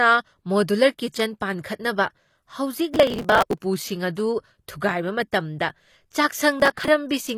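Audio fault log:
throughout HE-AAC compression: The speech has likely passed through HE-AAC at a low bitrate, with the plainly audible damage pointing to something near 24 kbps. Only the lower band is truly coded, and the treble is rebuilt by copying lower bands upward under a coarse envelope. The top end stays bright but its harmonics no longer line up with those below, so sibilants come out gritty and metallic, and nothing is left above 14.9 kHz.
2.93–3.61 s and 6.60–6.88 s processor overload crackle: In both stretches the processor fell behind and missed buffer deadlines many times in a row. Each missed buffer was skipped outright, leaving a short hard-edged gap. The spacing of the tears fits buffers of about 5 ms. The first burst points to roughly a hundred misses and the second to a few dozen. Packed together, these gaps sound like a gritty tearing crackle over the speech that stops once the load eases.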